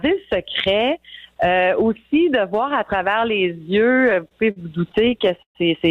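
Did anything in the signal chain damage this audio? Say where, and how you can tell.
Yes, the network stage did. From 3.91 to 5.58 s there are repeated stalls (stutter), about fourteen hitches, the longest around 126 ms. Packets arrived late, the jitter buffer kept running dry, and the receiver stretched the last sound to cover roughly a fifth of that stretch. Nothing's lost, but it drags.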